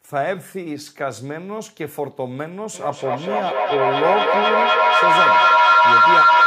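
Feedback howl runs from 2.74 s to the end. A microphone-loudspeaker loop gains level each pass. It rings near 1.5 kHz, repeating about every 200 ms.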